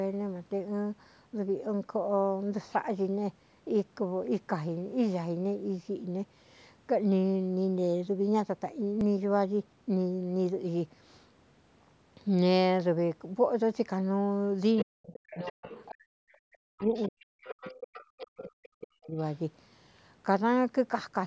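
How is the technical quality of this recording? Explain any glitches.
The speech has three kinds of glitches: one brief skip and, late in the clip, a stretch where a second voice bleeds in while the main voice is pushed down.

At 9.01 s there is a dropped buffer (overrun). About 7 ms of audio is missing, and the two sides are spliced together directly. The result is a jump in the sound and no gap of silence. That lack of silence is what separates it from a dropout. The likely cause is the program reading its buffer too late.

The other side's voice is leaking through at 14.77–15.92, 16.29–16.33, 16.78–18.04, 18.40–18.45, 18.81–18.87 and 19.18–19.25 s. It is about 20 dB below the main speech, and some short scraps sit about 35–40 dB down. This is most likely loudspeaker echo that the echo canceller left behind. It is a separate voice, not reverb on the main one.

Speech is suppressed in double talk from 14.83 to 17.68 s and from 18.10 to 19.18 s, for about 3 s in total. 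The main voice dips by as much as about 40 dB. The likely cause is the canceller ducking both voices at once. That link to the other voice distinguishes it from a plain level fade.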